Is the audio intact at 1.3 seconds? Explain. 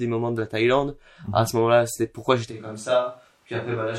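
Yes, the audio is intact at 1.3 seconds, with no fault audible at that point.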